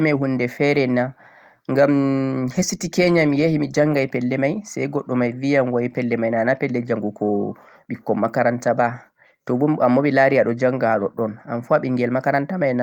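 Nothing goes wrong anywhere in this bit of speech, so there's no fault to point to at any moment.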